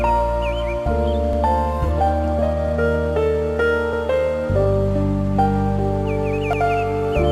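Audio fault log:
1.33–1.43 s, 3.93–4.03 s, 6.53–6.63 s: overlapping chunks. The audio was cut into pieces of about 2.5 s, and each piece was joined starting 100 ms before the previous one had finished, so that final 100 ms plays a second time at every seam. At each of these three joins, spaced about 2.6 s apart, the sound briefly jumps back and repeats itself. This is heard as a short stutter with a click where the copies meet.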